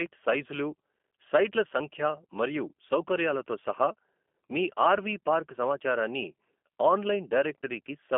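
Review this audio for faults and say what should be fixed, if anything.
G.729 codec damage runs through the whole clip. The sound is rebuilt from a vocal tract filter plus sparse pulse excitation, so it comes out rough and slightly synthetic, which fits an 8 kbit/s stream. The band sits at 250 Hz to 3.4 kHz, with nothing above 3.5 kHz. To prevent it, carry the call on a wideband codec such as G.722 or Opus rather than G.729.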